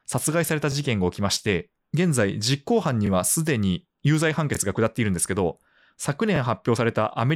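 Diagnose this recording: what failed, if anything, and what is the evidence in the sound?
Driver or buffer stage: a repeated buffer at 0.72, 3.07, 4.55 and 6.36 s. Each 23 ms piece replays once with a hard join, which fits a 1024-sample buffer.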